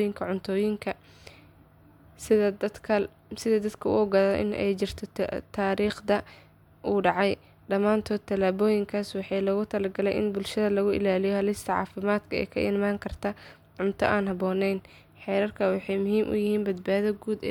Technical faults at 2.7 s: none

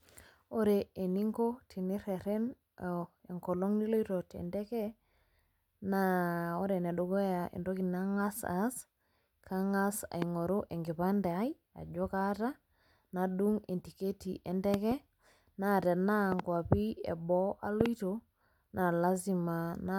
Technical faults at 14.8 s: loud pop

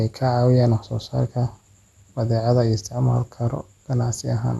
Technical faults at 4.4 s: MP2 compression

